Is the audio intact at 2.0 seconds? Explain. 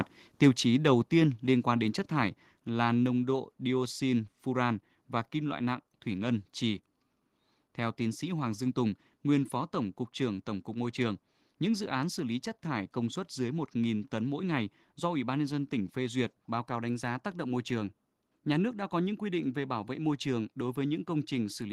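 No. At 2.04 s, between "tiên liên quan đến" and "thải là", the microphone volume stepped down, likely because the call software judged the input too hot and cut it. The speech and background drop together by about 3 dB in one abrupt step.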